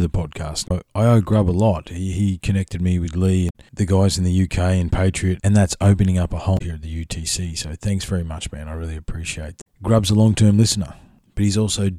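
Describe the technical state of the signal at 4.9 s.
At 4.9 s the speech signal is intact, with no audible technical fault at that moment.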